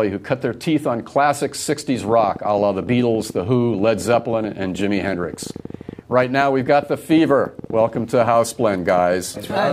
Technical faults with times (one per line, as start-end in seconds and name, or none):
1.95-9.58 train of clicks